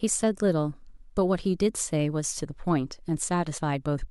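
At 3.57 s the speech jumps forward: this is compressed frames skipped. Whole frames of the encoded stream never reached the output, either missing or rejected by the decoder as damaged, so about 50 ms of audio is simply absent, which fits a pair of 26.1 ms frames. Because adjacent frames overlap, the join comes out as a short smeared blip, not the sharp click of a sample-level cut. Unlike a dropout, no silence is left behind.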